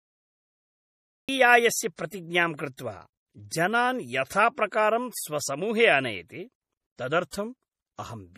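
Speech, and the first thing you notice is a cut-off start: there's nothing but digital silence for the first 1.29 s, and then the audio jumps in mid-sound at 1.29 s with no natural attack or fade-in, exactly what you get when a recording or stream begins a beat late. Running through the whole thing is plainly audible MP3 compression. Nothing comes through above 15 kHz, and the watery, swirly texture sounds like the encoder starving for bits and zeroing the weaker frequency lines, which then flicker on and off from frame to frame. The likely cause is a low-bitrate MP3 encode, and the damage level fits something around 40 kbps. That same codec is behind the pre-echo you can pick out at 1.96, 2.76, 3.49, 4.28 and 7.31 s. Each time a sharp onset lands late in a transform block, the quantisation noise sized for the loud part gets smeared backwards into the quiet gap before it, so you hear a short hiss lasting roughly 25 to 32 ms ahead of the attack, and the attack itself comes across soft and blurred rather than crisp.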